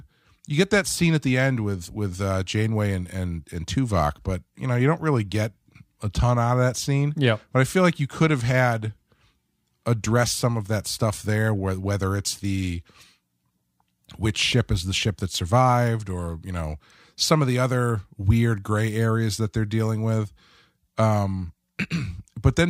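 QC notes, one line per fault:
No fault found in this clip.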